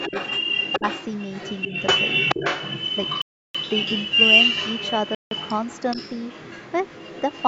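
A speech recording runs under a delayed second copy of itself for its whole length, from 0.0 s to about 7.45 s. That copy trails the direct speech by 425 ms and sits at roughly the same loudness, so the two overlap into a doubled, smeared texture rather than a faint tail. This is an echo leak, likely from a far end on loudspeaker whose echo canceller let its microphone pickup through and sent it back down the line. Early in the clip, while the direct speech and the returning copy overlap, the speech level dips briefly three times: at 0.09 to 0.13 s, 0.79 to 0.84 s and 1.68 to 1.73 s. Each dip lasts 40 to 50 ms. The first and third drop by around 10 dB and the second goes deeper, to about 15 dB. That pattern points to speech suppressed in double talk, likely the echo canceller failing to separate the talker from the loudspeaker return and attenuating both. Later, the audio cuts to silence twice, for 330 ms from 3.22 to 3.55 s and for 164 ms from 5.15 to 5.31 s, then picks up again. 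These are Bluetooth stalls, likely from radio interference delaying packets until the headphone buffer emptied and playback paused. The call microphone processing shows as nothing above 8 kHz.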